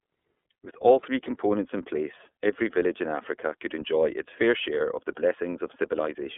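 Throughout the speech, the sound is thin and boxed-in, with a faintly rough, synthetic edge. Nothing reaches above 3.8 kHz, and the usable band runs from about 250 Hz to 3.5 kHz. That is the iLBC codec at work. It codes each 30 ms frame's excitation independently of the one before, and its quality fits the 13.33 kbps mode. The frame-by-frame coding leaves plainly audible damage, a grainy texture across the whole clip.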